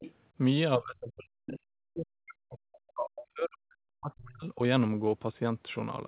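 From 0.0 to 0.13 s, a faint second voice sits under the speech, roughly 20 dB below it. This is the other side's voice leaking through. The far end's audio was likely played on the talker's loudspeaker and picked up again by the microphone. The echo canceller did not remove all of it. A short scrap of that returned sound survives at the very start.

Between 0.77 and 4.6 s the speech keeps sinking and recovering. At its deepest it drops by around 40 dB. That is close to silence. About three seconds in total are affected. This is speech suppressed in double talk. Both sides were likely talking at once. The echo canceller could not tell the talker from the echo, so it turned everything down. The voice stays within the narrow band that ends at 4 kHz, which fits a G.711 call codec.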